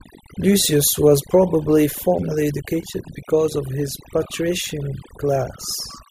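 A speech recording where, from start to finish, the background drops to near silence flecked with twinkling, chirpy specks. That is overdone noise removal: a noise reducer set too hard pulls individual frequency bands down whenever they approach its noise estimate, taking the quieter parts of the voice with them.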